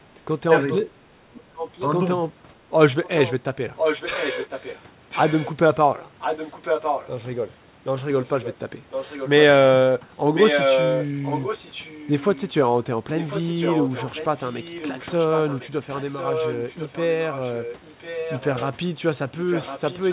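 Speech suppressed in double talk runs from 0.09 to 1.61 s. The voice dips in pieces for roughly a second in total, falling by around 30 dB at worst. This is likely an echo canceller treating both sides talking at once as echo and turning the near talker down with it.

Echo leak overlaps it from 0.60 to 1.88 s. A copy of the voice returns 1.05 s late, about 10 dB below the speech. The cause is likely a far-end loudspeaker whose echo canceller failed to strip what its microphone caught.

The echo leak returns from 3.04 to 7.10 s, louder at about 5 dB below the speech and with the same 1.05 s delay. Inside it, speech suppressed in double talk briefly pulls the voice down by about 10 dB from 3.40 to 3.45 s.

Further echo leak follows from 8.21 to 9.29 s at about 10 dB down. It then runs from 10.34 s to the end at about 5 dB down, again trailing the voice by 1.05 s. Everything is band-limited to 4 kHz by the G.711 call path.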